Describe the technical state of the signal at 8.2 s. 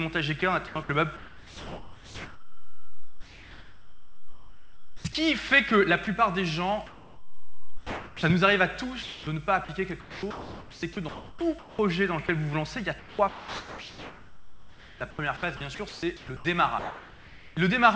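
Onset clipped by the voice detector, from 8.16 to 8.23 s: the first 70 ms of the returning sound are missing, so it begins abruptly without its soft attack. This is likely because the sender's detector was slow to register that sound had resumed, so those opening moments were never transmitted and the receiver kept playing filler noise over them. The sound then enters at full strength instead of building up.

Comfort noise in place of the background, from 6.87 to 8.23 s: for about 1.36 s leading up to that clipped onset, the real background is replaced by a smooth, featureless hiss, about 2 dB quieter than the background it stands in for. The likely cause is that the sender stopped transmitting during the pause, and the receiver generated shaped synthetic noise to fill the gap until real audio returned. Across the call path, which fits a G.722 codec, nothing is present above 8 kHz.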